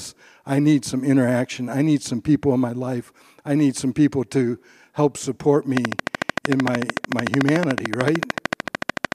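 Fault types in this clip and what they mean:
Train of clicks: from 5.77 s, after "people to help support", regular ticks at 13.4 per second, roughly 20 dB above the speech, likely from interference or a faulty connection.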